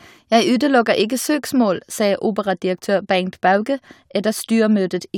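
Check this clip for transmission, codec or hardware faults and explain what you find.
The speech signal comes through technically intact, with no audible faults anywhere in the recording.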